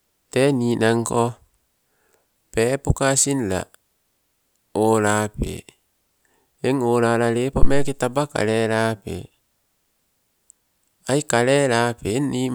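Speech recording with a phantom power thump at 7.63 s, lasting until 8.00 s, just before "taba kalelape". A supply switched on a live input sends a step through the coupling capacitors, giving a deep thump peaking at about -1 dBFS and decaying over roughly 84 ms.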